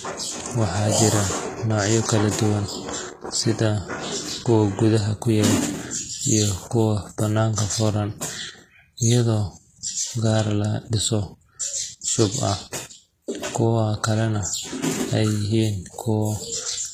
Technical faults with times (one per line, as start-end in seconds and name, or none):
0.00-16.93 HE-AAC compression